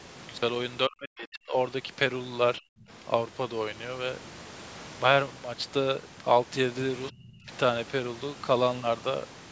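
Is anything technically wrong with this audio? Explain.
Yes. From 0.88 to 1.54 s, 2.59 to 2.84 s and 7.1 to 7.51 s the speech sinks, by up to about 40 dB in the first, about 35 dB and about 25 dB after. This is likely speech suppressed in double talk: the echo canceller mistook the talker for echo while the far side spoke and ducked both.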